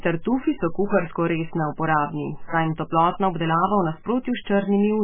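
MP3 compression, heavy, runs from start to end of the speech and is the likely cause of its dull, watery character. Nothing reaches above 3.5 kHz, so the encoder has sliced off the treble at a fixed point, which fits a very low bitrate of roughly 10 kbps. With so few bits, weak frequency lines drop in and out between frames, leaving a swirly, warbling texture, metallic chirps on s sounds, and smeared consonant attacks.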